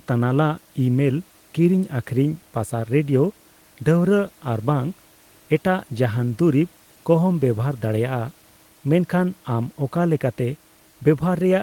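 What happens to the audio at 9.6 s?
Nothing goes wrong at 9.6 s: the speech carries on intact, with only the room's own background noise sitting about 35 dB beneath it, as it does throughout the recording.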